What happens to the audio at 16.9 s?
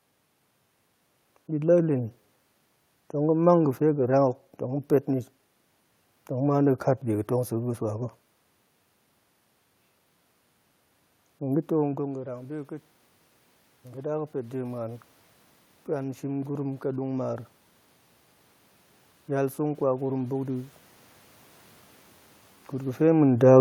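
At 16.9 s the automatic gain is still rising, from 11.48 to 17.52 s. The level fell about 16 dB as the talker moved away, so the gain creeps up about 8 dB, and voice and room noise swell together.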